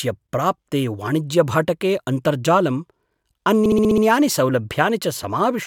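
From 3.65 s to 4.03 s the speech stutters: a run of three 64 ms frames plays again, six extra frame plays in all. This is repeated frames, where a run of compressed frames was written or sent more than once and the decoder dutifully played each copy again. The repeats add 384 ms to the audio, and everything after 4.03 s arrives that much later than it should.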